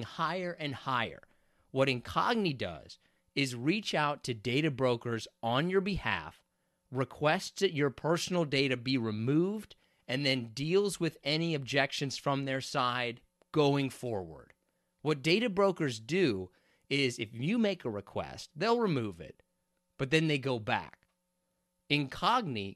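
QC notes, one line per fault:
Nothing stood out on listening to this speech recording.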